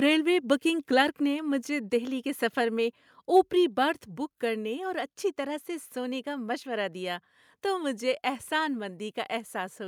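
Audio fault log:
1.02 s, microphone volume stepped down: between "ریلوے بکنگ" and "نے مجھے دہلی کے", the speech and the room behind it suddenly drop by about 2 dB, likely because the call software cut the input gain in one step. On a waveform the envelope shrinks abruptly, and a spectrogram shows all bands dimming together at one vertical line.
3.36–3.40 s, microphone overload: after "دہلی کے سفر میں" and before "برتھ بک کرنے اور", the loudest peaks push about 1 dB past the converter's limit and their tops are sliced off. Roughly 7% of samples in that stretch sit flat at the rail, giving a brief harsh crackle. The waveform shows squared-off crests, and the spectrogram shows a smear of added high-frequency energy.
4.08 s, microphone volume stepped down: just before "بک کرنے اور اچھی", shortly after the overload, the whole signal falls again by about 3 dB in a single step, likely as the input volume is lowered. 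The waveform amplitude visibly steps down, and the spectrogram darkens uniformly across frequencies from that instant onward.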